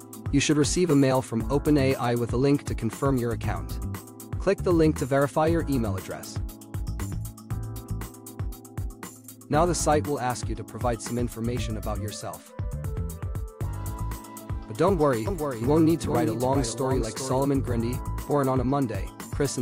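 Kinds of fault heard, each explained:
Doubled audio track: from 15.27 to 17.45 s a dry copy trails about 400 ms behind, roughly 5 dB down, likely a second, slower capture path.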